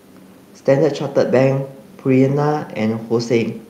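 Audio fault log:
No faults heard.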